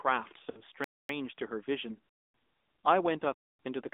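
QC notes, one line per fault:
Throughout: AMR narrowband mobile codec. The speech has passed through AMR-NB at about 10.2 kbps, and the damage is plainly audible. The line band runs from 250 Hz to 3.6 kHz, so the voice is thin and boxy with nothing above 4 kHz. At this bitrate each frame's excitation is a sparse set of pulses driving a vocal-tract model, which gives a buzzy, synthetic edge. On a spectrogram the energy stops in a hard ceiling below 4 kHz and the low end is trimmed away.
0.50–0.61 s and 3.18 s: lost AMR speech frames. At 0.50 s a run of three frames, 60 ms in all, fails, and the decoder fills the hole by repeating the last good pitch and spectral envelope at falling gain. The sound smears into a drawn-out, fading warble, and the speech comes back rough for a moment. At 3.18 s a single 20 ms frame goes the same way as a brief dip. On the waveform each shows a decaying, too-regular stretch where the speech should continue, and on the spectrogram the harmonics go flat and fade.
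0.84–1.09 s, 2.09–2.34 s, 3.34–3.59 s: gap between chunks. The audio arrives in 1 s chunks, and a 250 ms silence sits at each join, probably from padding or a player starting each chunk late. No speech is lost, but the flow is cut off sharply three times at an even spacing. The waveform shows flat, hard-edged holes at the same interval. The spectrogram shows blank vertical bands with abrupt onsets and offsets.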